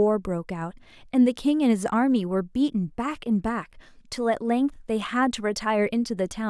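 A speech recording with no technical faults to report. Nothing wrong can be heard at any point in it.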